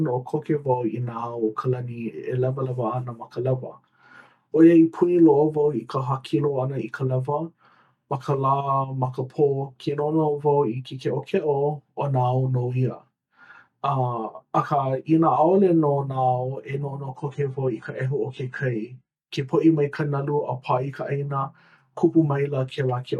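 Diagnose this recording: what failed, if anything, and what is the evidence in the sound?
An adaptive stream at a lower bitrate affects the speech from 17.16 to 19.16 s, a network-driven codec switch. With no gap, the treble suddenly stops at 9.5 kHz and artefacts thicken, which fits a drop from roughly 96 to 32 kbit/s AAC before recovery.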